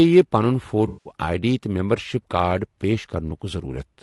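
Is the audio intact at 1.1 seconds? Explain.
No. From 0.87 to 1.11 s, AAC frame loss with concealment: a run of frames, about 180 ms of coded audio, never reached the decoder, which patched the gap by reusing and scrambling the last good spectrum. The result is a smeared, noisy, phasey stretch where the speech loses its definition, ending right around 1.1 s. Underneath, the speech is rough and grainy, with noise filling the spaces between harmonics and a synthetic-sounding top band. This is likely low-delay AAC compression, AAC-ELD, whose short frames resolve pitch poorly at a bitrate consistent with 32 kbps.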